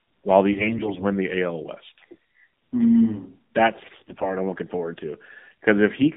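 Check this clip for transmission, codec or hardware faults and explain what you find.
The clip has two related faults: narrowband mobile coding across the whole recording, and three bursts of AMR bit errors on top of it.

AMR narrowband mobile codec, throughout: the speech passes only from about 150 Hz to 3.7 kHz, so everything above 4 kHz is gone. The codec rebuilds each 20 ms frame from a vocal-tract filter excited by a sparse set of pulses. Here the coding damage is plainly audible: the speech is buzzy and somewhat synthetic, which fits a low rate around 7.4 kbps.

AMR bit errors, at 0.52 to 1.05 s, 2.12 to 2.15 s and 3.84 to 4.30 s: unprotected bits in the frames arrived flipped while the checksum on the critical bits still passed, so the decoder used the frames. The excitation pulses land in the wrong positions, and the fine gain, pitch and spectral values drift. Pitch and loudness roughly hold, but the speech turns hoarse, scratchy and gargly. 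The error rate is about 10% in the first two bursts and about 15% in the last, so the last is the heaviest.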